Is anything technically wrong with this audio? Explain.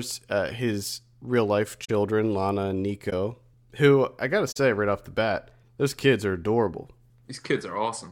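Yes. There is corrupt frame concealment at 1.84 to 1.90 s, 3.10 to 3.13 s and 4.51 to 4.58 s. The decoder detected damaged AAC frames, likely two, one and three, and masked them.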